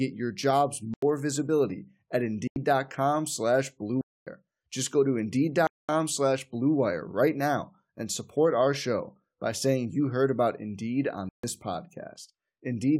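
Likely buffer underruns in the processing chain left blocks of digital silence in this speech clip at 0.94, 2.48, 4.01, 5.67 and 11.29 s. The first two last 85 ms, which fits a 4096-sample buffer. The others run 146 to 256 ms, each a hard hole.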